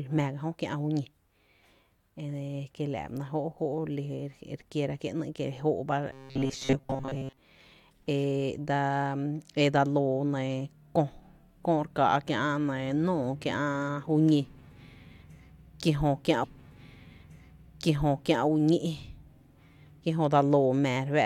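From 6.12 to 7.37 s, new audio likely arrived too slowly and the software kept refilling the gap by looping a tiny stretch of about 7.5 ms while most of the real speech was skipped. That repetition imposes a fixed 134 Hz buzz, giving robotic sound from repeated short buffers: a rigid, metallic drone that only loosely tracks the speech.

At 16.43 s the player fetched or queued the same stream segment twice, so about 2.0 s of speech plays again through 18.43 s. The stream segment repeated is heard as a brief blip at the jump back, followed by a replay of the passage just heard.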